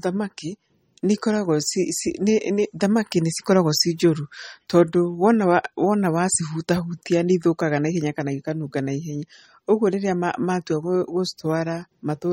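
Throughout, the speech likely went through MP3 compression, consistent with about 34 kbps: treble ends at 15.9 kHz, and flickering detail sounds plainly watery and swirly.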